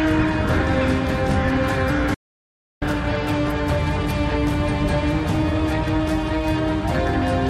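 At 2.15 s the sound cuts out abruptly and returns at 2.82 s, an audio dropout to silence lasting about 0.67 s. The gap holds silence with no room tone, most likely because the input signal was lost while recording continued writing silence.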